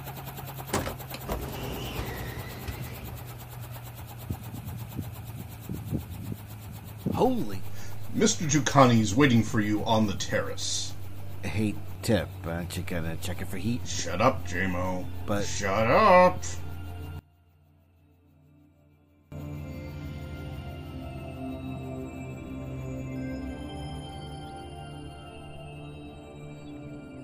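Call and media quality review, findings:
Polarity fault, one channel inverted, 17.19 to 19.32 s. Likely a wiring or mixer flip on one leg of the stereo pair; the common centre content cancels on mono fold-down. Level falls about 22 dB, centred material and low end nearly gone, leaving only a faint residue of the inter-channel difference until recovery at 19.32 s.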